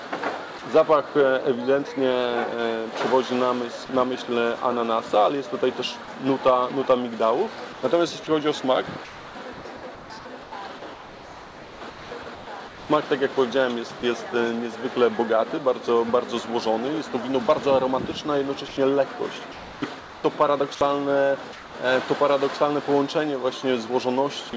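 Three brief gaps, at 3.86–3.89 s, 14.00–14.03 s and 24.50–24.53 s, sound like sound dropped by the voice detector: about 20 ms of real sound gives way to a 30 ms patch of comfort noise, likely from a sender-side voice detector misreading the sound as background. On a waveform each shows as a short flat, noisy notch; on a spectrogram, a thin smooth stripe. Between 7.73 and 12.89 s, and again between 18.68 and 21.74 s, the sound is likely chopped by the voice detector, which repeatedly switches sending off and on. Comfort noise replaces about 2.28 s of the first stretch and 0.9 s of the second, so the audio stutters. A waveform shows the envelope repeatedly collapsing to low, even noise. A spectrogram shows featureless bands breaking up the detailed texture. The sound passed through a G.722 call path at 64 kbps, so a spectrogram shows nothing above 8 kHz.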